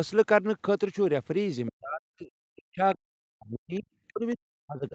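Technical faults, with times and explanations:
1.68–3.89 s and 4.11–4.94 s, speech suppressed in double talk: The echo canceller likely mistook simultaneous talk from both ends for its own loudspeaker echo and clamped down on the microphone signal. The talker's speech sinks by as much as about 40 dB, dropping out or thinning for roughly two seconds in the first stretch and about 0.7 s of the final stretch.
4.07–4.13 s, other side's voice leaking through: The echo canceller likely left a scrap of the far-end voice in the microphone signal as it came back out of the loudspeaker. It surfaces as a brief, faint fragment about 30 dB below the talker's speech, just as the second suppressed stretch begins.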